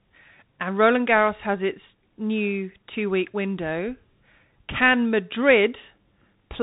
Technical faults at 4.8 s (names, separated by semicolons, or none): Bluetooth CVSD headset codec